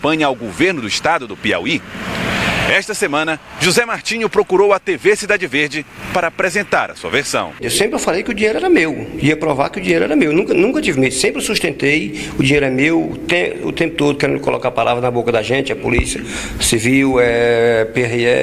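No technical fault can be heard anywhere in the recording, with the signal level, continuity and frequency content holding steady throughout.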